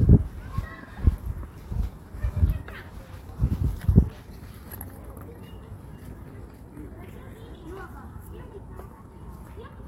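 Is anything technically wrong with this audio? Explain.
No, nothing technically wrong can be heard anywhere in this audio.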